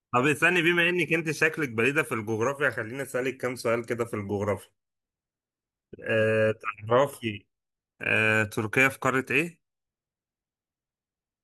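No technical faults can be heard anywhere in this speech recording. Nothing in the audio calls for a timestamp or further comment.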